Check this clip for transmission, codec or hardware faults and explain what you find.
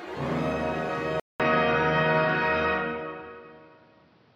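One fault is present. From 1.2 s to the end, the sound suddenly turns duller and boxier after a 200 ms gap. The likely cause is an input switched to a poorer device. Its narrower band leaves nothing above 6.1 kHz. The level shifts by a few decibels. A new noise floor sits well below the signal.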